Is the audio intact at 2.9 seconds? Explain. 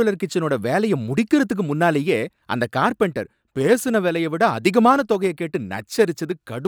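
Yes, the speech at 2.9 seconds is intact, with no dropout, click, distortion or other fault at that point.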